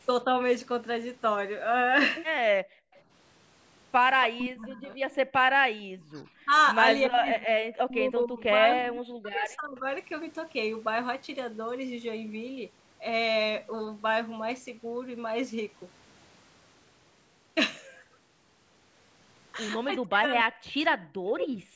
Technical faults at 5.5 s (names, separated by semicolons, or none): speech suppressed in double talk